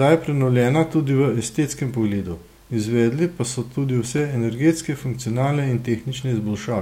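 A speech clip with a short run of CD scratch ticks between 3.79 and 4.31 s: five little clicks, each a millisecond or so at most, spaced at roughly eight a second. That regular spacing is the giveaway. A scratch or blemish on the disc passes under the laser once per revolution, wiping out more data than error correction can rebuild, so the player patches over the damaged samples and you get a tick each turn.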